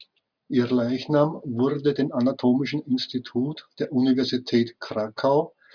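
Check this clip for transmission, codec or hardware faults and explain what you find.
No faults found in this clip.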